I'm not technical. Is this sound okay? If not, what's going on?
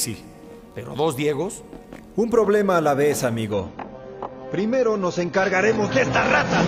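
No. From 3.52 s to the end, an adaptive stream at a lower bitrate makes the sound suddenly dull and rougher, with no silent gap like a dropout.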